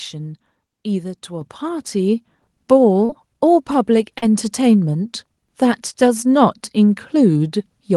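Speech recording with two kinds of fault. At 1.41 s the microphone volume is stepped up: the call software judged the input too quiet and raised the device gain in a single jump of about 6 dB, so voice and background both get louder at once. Short concealed packet loss follows at 3.05–3.10 s and 4.18–4.23 s. In each case about 40 ms of audio arrived too late for the decoder, and the receiver bridged the gap by extrapolating the preceding sound before blending back in. Each gap is heard as a brief smear or wobble.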